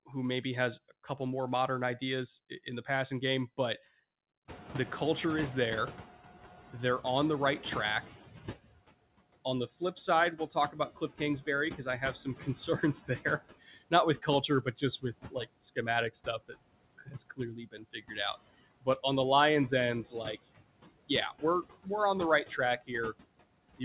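Throughout the clip, noise suppressor artifacts come from the suppressor pulling down the bands it judges to be steady noise, by about 19 dB, frame by frame. The background dips between phrases and swells under the speech, all band-limited with nothing above 4 kHz from the call path.

At 4.48 s the room noise jumps by about 23 dB, and the noise suppressor is catching up: its noise estimate lags the new level for about 4.1 s, until 8.57 s. The louder background breaks through with only about 13 dB of reduction at first, then sinks as the estimate adapts.

From 9.45 s to 19.04 s the speech is cut by the noise suppressor, which mistakes parts of the speech for noise and turns them down by as much as about 20 dB, roughly two seconds in all. Soft consonants and word endings sound swallowed. Shorter cuts follow at 19.71 to 20.38 s (about 14 dB), 21.08 to 21.88 s (about 19 dB) and 22.45 to 23.14 s (about 16 dB), each lasting only a brief fraction of a second.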